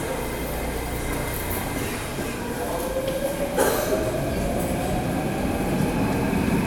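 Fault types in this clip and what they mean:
No technical fault can be heard anywhere in the audio, and the signal stays steady and intact throughout.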